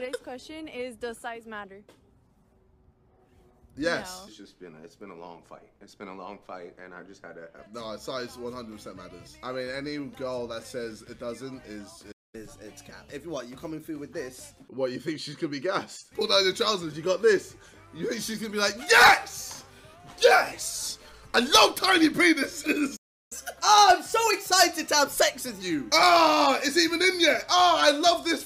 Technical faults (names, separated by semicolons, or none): playback stall; catch-up at higher speed